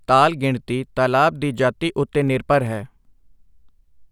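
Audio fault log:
2.09 to 4.01 s, periodic USB or driver dropouts: in this speech, tiny slivers of audio, a small fraction of a millisecond each, are skipped every 63.9 ms, so about thirty evenly spaced ticks sound over the signal. That strict spacing, and ticks heard only where there is sound, set them apart from random clicks or crackle.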